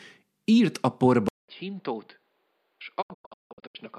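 Speech, and right after "írt a" at 1.29 s the sound goes quiet for about 200 ms, then returns duller and boxier, roughly 10 dB lower, with nothing above 5 kHz and a new noise floor about 40 dB under the voice. That is most likely an input switched to a poorer device. On a spectrogram the upper band is abruptly cut off flat at 5 kHz from 1.29 s to the end, after a short blank gap. The waveform shows the lower envelope and a faint constant noise between syllables. From 3.01 to 3.81 s a digital broadcast dropout punches several holes into the sound, about 528 ms lost in total across a span of about 768 ms. The longest hole is 168 ms, and each cut fades in and out over about 20 ms. This is the receiver muting whenever frames fail to arrive intact. The hole lengths point to frames of roughly 24 ms. In the waveform these appear as a row of flat silent gaps with short tapered edges, and on the spectrogram as empty vertical strips.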